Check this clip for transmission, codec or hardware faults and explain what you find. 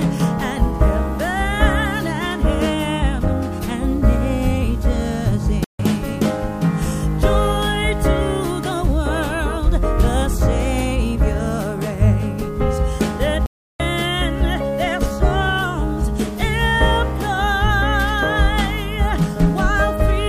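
There are two playback stalls: the sound cuts to silence from 5.64 to 5.79 s, about 150 ms, and again from 13.46 to 13.80 s, a longer gap of about 340 ms. Both are abrupt dropouts in mid-flow rather than fades. The likely cause is the player starving for data or its audio thread getting blocked, so the output sits silent until the buffer refills and playback picks up again.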